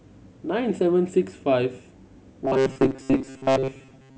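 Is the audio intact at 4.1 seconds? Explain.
No. From 2.45 s to the end, the speech has robotic sound from repeated short buffers. It is a rigid, metallic buzz at 133 Hz. This likely comes from repeating a stretch of about 7.5 ms for most of that span while new audio is skipped.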